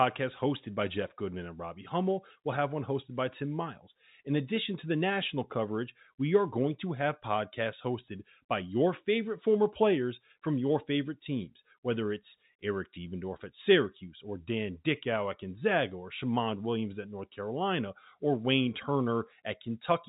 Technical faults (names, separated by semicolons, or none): none